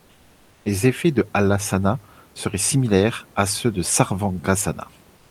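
A speech clip whose last moments, from 5.17 to 5.30 s, swap the room noise (about 34 dB below the speech) for comfort noise in place of the background: a smoother noise about 3 dB quieter, likely from discontinuous transmission such as Opus DTX. A spectrogram shows smooth, uniform texture there; the waveform shows a slight level drop.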